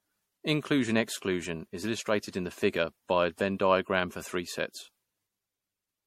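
Generation loss throughout this speech clip: swirly, hollow, smeared sound with blurred attacks and nothing above 16.5 kHz, likely from around seven successive re-encodes at roughly MP3 64 kbit/s.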